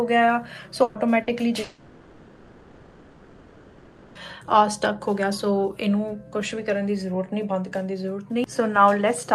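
From 0.83 to 0.98 s there is a burst of packet loss. About 120 ms of audio never arrived, and the receiver stretched the last sound into a held buzz or hiss that fades before the audio resumes further on. It is longer than a brief smear.

At 1.23 to 1.30 s a short concealed packet loss fills a 40 ms hole. It sounds like a quick smear or wobble where the last sound was extended and then blended back in.

From 1.63 to 4.18 s the sound gives way to a continued buzz or hiss that dies down into a low steady noise. About 2.5 s of audio is missing, and the sound picks up later in the passage. This is likely a long network dropout. It differs from the burst earlier because the fill outlasts its fade by far and settles into noise rather than rejoining quickly.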